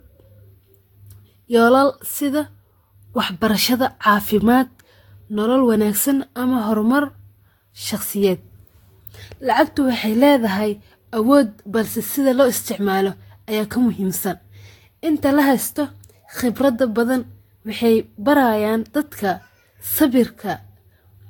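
From start to finish the speech sounds swirly, smeared and hollow, with blurred consonant attacks and nothing above 19.2 kHz. The cause is likely generation loss: around five successive lossy encodes, which fits Vorbis near 70 kbit/s, each re-quantising on a shifted frame grid.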